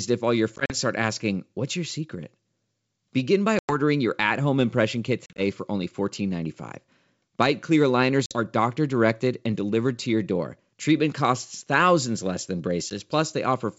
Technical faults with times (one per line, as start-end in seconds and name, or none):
0.56-0.75 packet loss on an ADPCM call
3.59-3.77 packet loss on an ADPCM call
5.26-5.41 packet loss on an ADPCM call
8.26-8.37 packet loss on an ADPCM call
12.90-12.96 packet loss on an ADPCM call